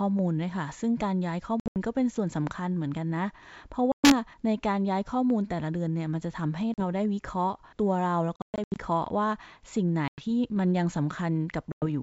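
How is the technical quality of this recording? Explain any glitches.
The recording is wideband call speech, clear up to about 7 kHz, which fits G.722 coding at its full rate, but it is broken up by repeated dropouts.

Packet loss on an ADPCM call occurs at 1.60–1.77 s, 3.92–4.14 s, 6.74–6.83 s, 8.36–8.77 s, 10.08–10.25 s and 11.72–11.83 s. Lost packets become abrupt silent gaps: flat lines on the waveform, blank vertical bands on a spectrogram. Afterwards the decoder's predictor and step size lag the sender's, so speech returns with a click, distortion or wrong level.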